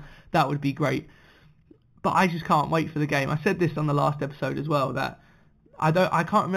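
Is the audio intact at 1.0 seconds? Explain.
No. At 1.0 seconds the speech carries imaging from linear upsampling, present across the whole clip. The audio was raised from 8 kHz to 48 kHz by joining samples with straight lines, which dulls the top of the original band and leaves a faint mirrored copy of it between 4 and 8 kHz, roughly 25 dB down. That copy gives sibilants a light metallic shimmer. A plain low-pass would sound muffled but clean, with no such sheen above 4 kHz.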